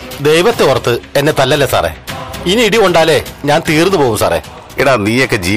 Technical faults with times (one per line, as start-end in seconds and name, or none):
none